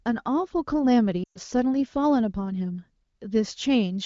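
Lost AMR speech frames from 1.24 to 1.39 s leave a gap of about 120 ms, which fits a run of six 20 ms frames. With those frames corrupted, the wideband decoder stretched the last good frame's pitch and vocal tract shape while cutting gain, so the speech smears briefly and fades quickly toward silence.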